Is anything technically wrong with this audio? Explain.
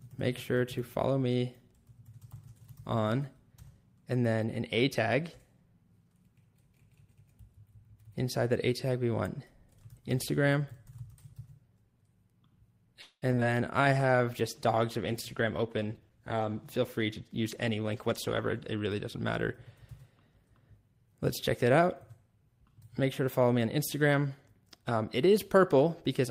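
Yes. A cluster of network-related faults sits between about 13.0 s and 18.9 s.

Call audio freeze, 13.01 to 13.24 s: the last sound is stretched into a fading buzz for roughly 205 ms, with about 30 ms of that near silence. The likely cause is packets stalling in transit and the jitter buffer running dry. When the audio resumes it picks up where it stopped, so nothing is lost, but a pause has been inserted and the delay has grown by about 205 ms.

Short concealed packet loss, at 13.32, 13.35 and 13.40 s: in each case a few tens of milliseconds of audio failed to reach the decoder in time. The receiver bridged each hole by extending the preceding sound, then cross-faded back into the real signal. This is heard as quick smears or wobbles in rapid succession, and around 80 ms of real audio is gone across the three. The first one also pulls the delay back by about 30 ms.

Jitter buffer slow-down, 13.82 to 14.18 s: the receiver was rebuilding its reserve, so it repeated single pitch periods and slivers of pause, adding about 60 ms. 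Playback drops to roughly 85% speed while the pitch stays the same, giving a drawn-out stretch.

Call bitrate drop, 13.92 to 18.89 s: the bandwidth estimate fell, and the encoder went from 40 kbps down to 17 kbps for nearly 5 seconds. With far fewer bits the codec quantises more coarsely and trims the upper frequencies, so the audio turns rougher, watery and duller until the rate returns at 18.89 s.

Jitter buffer speed-up, 15.41 to 15.93 s and 16.33 to 18.28 s: with surplus audio queued, the receiver cut out short pitch-period chunks to shrink the delay. The first pass runs at about 118% speed and removes around 100 ms, which sounds noticeably hurried. The second is gentler at about 106% and removes roughly 150 ms over nearly 2 seconds, giving a hurried feel at unchanged pitch.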